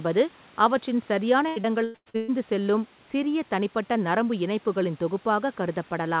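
From 1.48 to 2.3 s there's a burst of repeated packet loss, giving that robotic sound. Holes keep arriving one after another, the longest around 119 ms, and each is patched by stretching the last bit of audio. So over half the stretch is concealment, which makes it choppy, with pieces missing.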